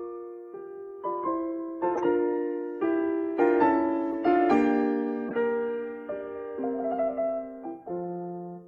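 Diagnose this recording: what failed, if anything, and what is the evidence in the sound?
Corrupt frame decoded, codec stage, at 1.95–2.00 s, 4.12–4.14 s and 5.28–5.36 s. Each is a short chirpy noise burst over the music, peaking around -20 dBFS, or about -30 dBFS at 4.12 s. Two or three damaged compressed frames were played anyway, and their misread codes put energy at the wrong frequencies.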